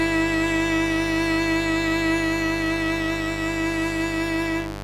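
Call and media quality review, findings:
Mains buzz, full length of the music clip. Probable unshielded cable, dimmer or rectifier on the audio path admitting switching spikes twice per 50 Hz cycle. Result: steady raspy buzz with 50 Hz harmonics into the kHz range, loud, about 10 dB below the music.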